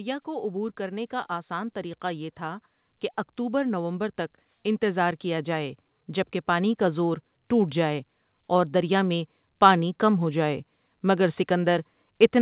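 A speech clip in which the level swells twice, voice and background rising together by about 5 dB, first from 0.24 to 2.68 s and again from 4.79 to 8.11 s. That is automatic gain rising: the gain control judged the input too quiet and eased its gain upward over a couple of seconds each time. The audio has nothing above 4 kHz, which fits a narrowband call codec such as G.711 A-law.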